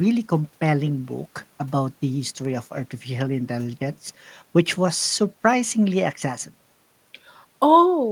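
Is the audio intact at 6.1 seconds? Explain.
Yes, at 6.1 seconds the speech is intact, with no dropout, click, distortion or other fault to be heard at that moment.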